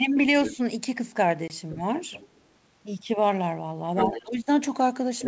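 Other side's voice leaking through first appears from 0.45 to 0.55 s, a second voice about 10 dB below the speech, likely because the echo canceller left some of the far end's loudspeaker sound in the microphone signal. At 0.54 to 0.59 s comes speech suppressed in double talk: with both sides active, the canceller likely treated the talker as echo and pulled the level down by a few decibels for roughly 50 ms.

Packet loss on an ADPCM call hits at 1.48 to 1.51 s. A 20 ms gap, consistent with a couple of lost packets, leaves a hard-edged silence. The decoder's predictor and step size then no longer match the sender's, so the speech comes back slightly distorted before settling.

The leak returns from 2.11 to 2.4 s, this time faint at about 25 dB down and likely another residual-echo escape. From 3.95 to 4.3 s it is much stronger, only about 5 dB under the speech. Overlapping it, from 4.06 to 4.47 s, double-talk suppression likely clamps the talker hard, dipping up to about 15 dB over roughly 300 ms. 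A final loud leak, around 5 dB below the speech, runs from 5.2 s to the end.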